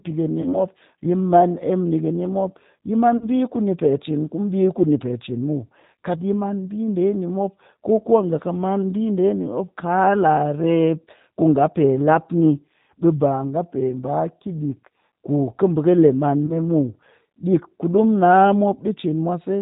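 The whole recording carries the G.729 codec, heard plainly. At 8 kbit/s it rebuilds the speech from a vocal tract filter, a pitch predictor and a few pulses per frame. Nothing above 4 kHz survives. The speech sounds narrow, rough and slightly synthetic.

At 0.42 to 0.57 s, just before "yi man", comes VoIP packet loss concealed by the speech codec. A 40 ms gap, which fits two lost 20 ms packets, is filled by extrapolating the last frame. The sound is stretched and fades, then recovers weakly. The same happens at 3.17 to 3.26 s, right after "mop yi man", again 40 ms. At 16.46 to 16.54 s a shorter 20 ms loss, pointing to one packet, leaves a brief smeared patch.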